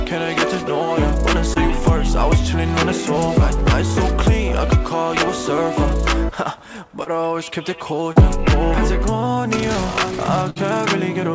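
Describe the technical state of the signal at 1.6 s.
A short concealed packet loss occurs from 1.54 to 1.57 s. About 20 ms of audio never arrived, and the receiver extended the preceding sound to cover the gap before blending back, leaving a brief smear or wobble.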